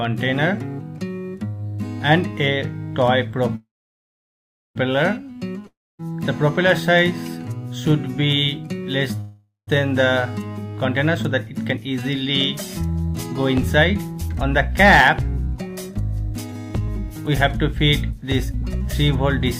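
At 3.55 s the audio stalls in a call audio freeze lasting about 1.2 s. The last sound is stretched into a fading buzz, then about 1.08 s of silence, before resuming exactly where it stopped with nothing lost. The likely cause is delayed packets draining the jitter buffer.

From 5.67 to 6.01 s a long network dropout leaves a short decaying tail and then about 0.25 s of silence. When the audio returns, roughly 0.32 s of material is gone, which points to a likely run of packets that never arrived.

A second call audio freeze at 9.21–9.69 s inserts about 0.47 s, with a faded tail and about 0.14 s of silence. The audio continues intact afterwards, again likely because late packets let the buffer run dry.

From 15.19 to 18.62 s a jitter buffer speed-up plays the audio at 104% speed with unchanged pitch. Around 150 ms is trimmed by removing many short pitch-period segments. The result runs slightly faster as the receiver works off excess buffered delay.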